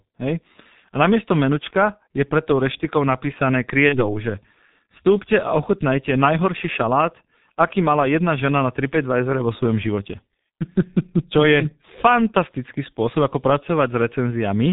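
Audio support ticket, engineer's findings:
Throughout: muffled, hoarse sound, nothing above 4 kHz, consonants smeared. Probable component: G.723.1 codec, heavy damage, consistent with its 6.3 kbit/s mode. Coarse 30 ms frames and a slowly updated voice model blur fast transitions. Differs from a simple narrowband filter: the roughness and smearing, not just lost treble, point to low-rate coding.

3.89–4.00 s: brief stretched sound fading in level, then weak or distorted sound before recovery. Probable component: VoIP packet loss concealed by the speech codec. About 30 ms missing, consistent with one lost frame. The decoder extrapolated from its last pitch and filter while lowering gain, and the error carried into the following frames. Differs from a plain dropout: no silent gap or click, and the damage outlasts the 30 ms loss.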